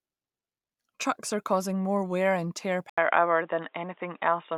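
The recording likely switched to a poorer input device at 2.9 s, after "more wear and tear": an 80 ms gap, then duller speech with nothing above 3.8 kHz and faint new background noise.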